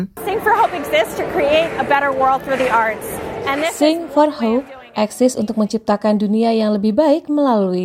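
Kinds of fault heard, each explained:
Bit error spike at 2.44 s: a single sample jumps to about -17 dBFS and drops straight back, as if one binary digit flipped in storage or transit. It sounds like one sharp, broadband tick that has nothing to do with the surrounding audio.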